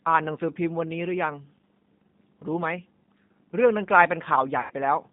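Throughout the clip the speech sounds thin and slightly rough, with a faintly synthetic edge and plainly audible coding damage. The band is confined to roughly 150 Hz up to 3.7 kHz, so nothing bright or airy survives. This is the G.729 codec, specifically G.729A. It models the voice with a vocal tract filter, a pitch predictor and a handful of pulses per short frame, which fits an 8 kbit/s stream.

From 4.61 to 4.73 s the speech is stretched into a buzzy tone or coloured noise that weakens as it goes, then sounds faint and distorted for a moment before recovering. This is VoIP packet loss concealed by the speech codec. About 90 ms of audio went missing, which fits three lost packets. The decoder filled the gap by repeating its last pitch and filter settings at falling gain, and because each frame builds on the previous one, the damage outlasts the gap itself.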